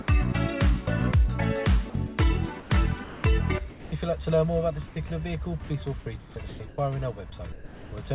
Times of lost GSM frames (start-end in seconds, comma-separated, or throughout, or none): none